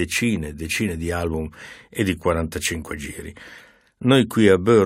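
No technical faults can be heard anywhere in the clip. Nothing is dropped, clipped, glitched or distorted along the way.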